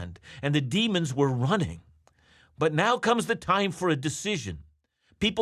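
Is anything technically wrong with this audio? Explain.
No, the signal shows no technical faults that can be heard anywhere in the recording.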